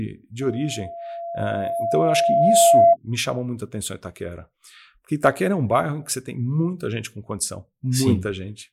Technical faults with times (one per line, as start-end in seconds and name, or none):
0.41-2.97 loudspeaker feedback squeal